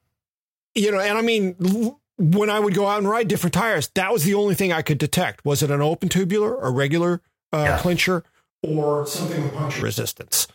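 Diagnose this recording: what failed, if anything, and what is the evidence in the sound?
At the capture stage, before the converter, the speech jumps from 8.65 s to 9.82 s into a roomy, hollow sound with thinner bass, roughly 5 dB quieter and with a room-noise floor only about 35 dB below the speech. This is a switch to a distant microphone, likely because the close microphone's signal dropped out. On a waveform the envelope steps down abruptly at both edges. A spectrogram shows reduced low-frequency energy, smeared reverberant tails and a raised noise floor between syllables.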